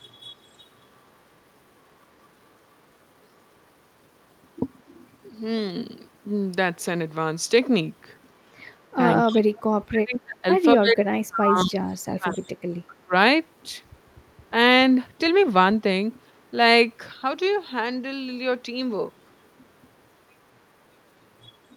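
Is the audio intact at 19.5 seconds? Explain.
Yes, the audio is intact at 19.5 seconds, with the speech continuing there without any audible fault.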